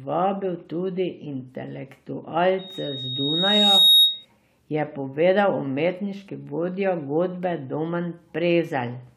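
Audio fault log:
2.58–4.25 s, loudspeaker feedback squeal: a pure 3.8 kHz tone creeps in and swells over about a second and a half to sit roughly 10 dB above the speech. The mic is hearing its own speaker and that frequency keeps looping back, until it drops away just before "je povedal umetniški vodja".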